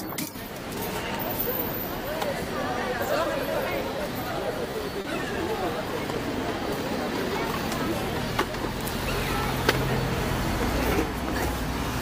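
A short stall from a late packet occurs at 4.71 to 4.76 s and again at 5.01 to 5.07 s. Each time a packet missed its slot and the jitter buffer emptied, so the receiver held the last sound for 20 ms and then 30 ms until the data arrived. Playback resumed from the same point with nothing lost, leaving a brief held, slightly buzzy stretch, and the audio ended up 20 and 30 ms later.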